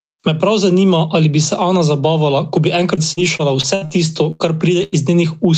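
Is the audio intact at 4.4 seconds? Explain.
No. A burst of packet loss runs from 4.31 to 4.42 s. The receiver extended the last sound for about 80 ms, fading it into a held buzz or hiss. It then jumped ahead, so about 80 ms of speech is missing. Gain pumping also runs through this moment. The gain drops by about 10 dB under loud sounds, likely from gain set too high feeding a fast limiter.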